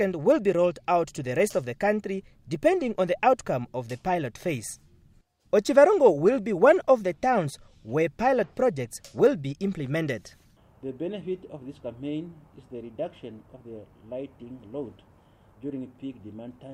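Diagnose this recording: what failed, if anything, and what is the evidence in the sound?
No stage failed; nothing in the sound indicates a fault.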